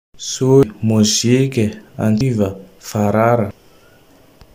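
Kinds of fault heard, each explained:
Compressed frames skipped: Whole blocks of the coded speech never reach the output, so the audio leaps forward without warning. This happens three times, at 0.63, 2.21 and 3.51 s. Each jump drops roughly 300 ms, which fits about three frames of roughly 93 ms each. The speech simply resumes further on.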